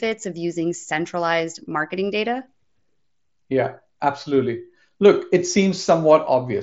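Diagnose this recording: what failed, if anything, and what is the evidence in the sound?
Nothing failed; no fault heard.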